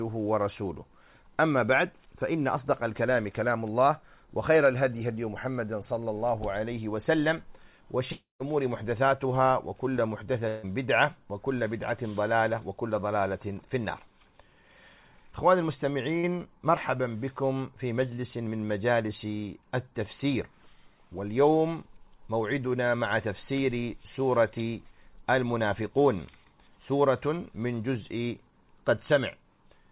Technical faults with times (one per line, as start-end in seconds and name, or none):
8.12-8.43 long network dropout
10.48-10.66 long network dropout
16.19-16.26 short concealed packet loss